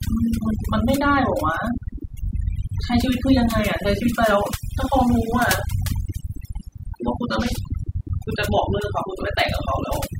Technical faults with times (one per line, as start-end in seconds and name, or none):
0.00-10.20 overdone noise removal